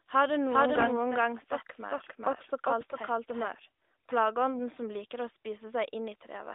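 From the start until 3.48 s, a doubled audio track runs: a second full-band copy trails about 400 ms behind, at roughly equal level, likely from an out-of-step capture path. It stops abruptly. From 2.81 to 2.96 s, AMR bit errors corrupt the narrowband phone-band signal. Flipped bits misplace the excitation pulses and skew the pitch and gain values, so the speech briefly turns hoarse, scratchy and gargly.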